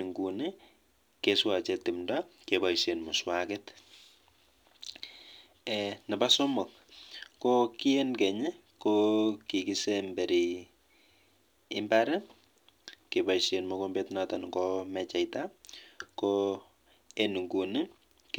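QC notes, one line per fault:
throughout: sample clock jitter. A fine hiss and grainy roughness ride on the speech, swelling on loud and bright sounds and gone in the pauses. Converter clock wander of a microsecond or two puts steep slopes off-time, leaving error about 35 dB below the signal.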